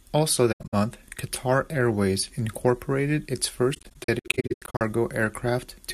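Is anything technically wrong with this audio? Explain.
Yes. The speech has two patches of AAC frame loss with muting. The first runs from 0.52 to 0.74 s, where about 170 ms of sound drops out in pieces over roughly 210 ms. The second, from 3.74 to 4.81 s, is longer, with about 550 ms missing across a one-second stretch. In both, the longest single gap is around a tenth of a second. The decoder filled each missing frame with silence, and the overlapping windows fade the sound out and back in, so the holes have soft edges. A hard digital dropout would start and stop with a click, and concealment that repeats earlier audio would fill the hole with a smeared or buzzy sound. Here the gaps are plain quiet fades.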